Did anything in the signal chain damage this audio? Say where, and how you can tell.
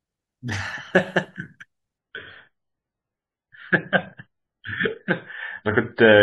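Yes. At the network stage, an adaptive stream at a lower bitrate takes over at 1.98 s and continues to the end. The speech abruptly loses everything above 5 kHz, with no gap, which fits a switch from a 128 kbit/s MP3 to one near 16 kbit/s.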